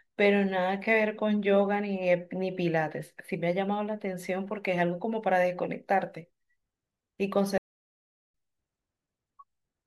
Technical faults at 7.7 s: playback stall

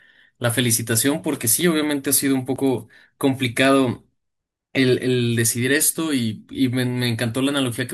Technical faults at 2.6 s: dropped buffer (overrun)

